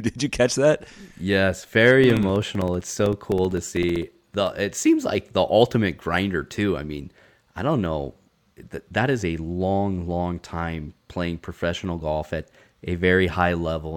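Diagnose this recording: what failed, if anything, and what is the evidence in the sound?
The driver or buffer stage shows periodic USB or driver dropouts from 2.04 to 4.47 s, ending just before "it seems like the". Roughly forty ticks recur every 64 ms, each about 2 ms of silence where a blocked transfer lost samples. The waveform shows evenly spaced gaps, and the spectrogram shows thin, regular broadband lines.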